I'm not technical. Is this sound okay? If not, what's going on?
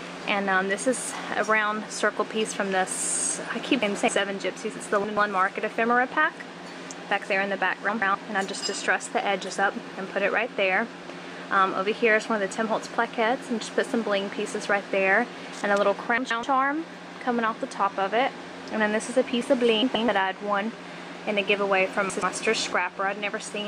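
No. At 3.82, 5.04, 7.89, 16.18, 19.82 and 22.10 seconds, the sound briefly flutters and garbles for about a quarter second. These are frames out of order: two neighbouring chunks of about 128 ms each played in swapped order. Nothing is lost, only scrambled.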